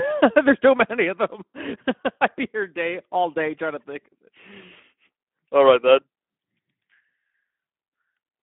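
Throughout the clip the speech carries Speex codec damage, plainly audible as a hoarse, grainy edge. This fits a low bitrate of about 11 kbps starving the excitation. The band runs roughly 200 Hz to 3.4 kHz, and a spectrogram shows nothing above 3.7 kHz.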